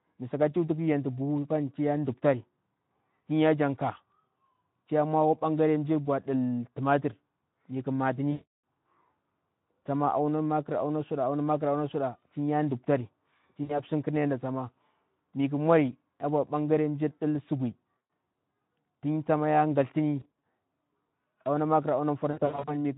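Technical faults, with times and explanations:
8.31–8.47 s, 13.63–13.81 s (just after "auna suda tinya ɗuptarir"), 17.97–18.09 s, 20.19–20.26 s and 22.31–22.71 s: VoIP packet loss concealed by the speech codec. Roughly 320, 60, 120, 120 and 240 ms of audio go missing, and the last two are broken into short gaps of up to 40 and 80 ms. The Speex decoder repeats its last pitch and filter at falling gain, so each gap turns into a fading buzz or coloured noise. Because each frame builds on the one before, the sound stays thin for a moment after the signal returns.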